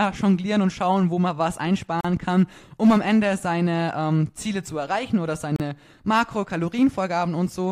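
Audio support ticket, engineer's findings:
Gaps at joins of encoded pieces in the speech, 2.01 s (about 38 ms) and 5.56 s (about 36 ms). Separately encoded segments spliced untrimmed, so encoder delay and last-frame padding leave short, smeared silences.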